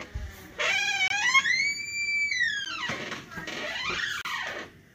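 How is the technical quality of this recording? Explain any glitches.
The recording has three dropouts. Each is a block of digital silence: most likely the output buffer went unfilled, so samples became zeros. The gaps fall at 1.08 to 1.10 s (about 23 ms, fitting a 1024-sample buffer), at 2.65 s (about 12 ms, fitting 512 samples), and at 4.21 to 4.25 s (about 35 ms). The sound cuts out and returns with no fade. The 12 ms gap is too short to register as silence and comes across as a tick or dip, and the longer gaps read as brief holes.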